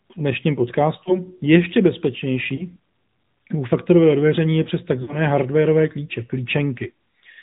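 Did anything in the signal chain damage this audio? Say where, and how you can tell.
Yes. AMR narrowband mobile codec damage runs through the whole clip, at the codec stage. The speech is capped at 4 kHz, so everything above that is missing, and it has the buzzy, synthetic quality of a vocal-tract model driven by a few pulses in each 5 ms. The coding damage is plainly audible, which fits an AMR-NB mode around 10.2 kbps.

Lost AMR speech frames occur at the network and radio stage, at 1.04 to 1.21 s, 2.56 to 2.65 s and 5.02 to 5.17 s. Each time, the decoder fills the gap by repeating the last good pitch and spectral settings with falling gain. The first two give a short dip or warble, consistent with one missing 20 ms frame each. The third, between "faktorového odvěření je přes" and "hardwareové klíče", is drawn out and fades further, which fits a run of about three frames, or 60 ms.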